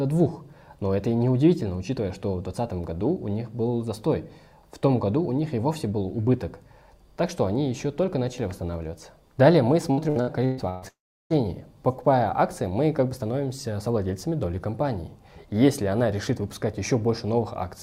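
From 9.91 to 10.85 s the sound turns choppy, the hallmark of repeated packet loss (robotic sound). Five short gaps arrive in quick succession, the longest about 127 ms, and each is bridged by stretching the preceding sound, so nearly half of this stretch is synthetic fill. Unlike a single dropout, the audio keeps returning between holes, giving a stuttering, choppy texture rather than one continuous fade.

Just after, from 10.88 to 11.44 s, the audio stops arriving for one long block, most likely a long network dropout. The last sound is held and smeared into a fading buzz for roughly 0.4 s, and about 0.34 s of the stretch is near-silence before the sound resumes. What separates this from the earlier robotic passage is the single sustained fade into quiet, with no intermittent return of real audio, and a sliver of material simply gone when playback picks up again.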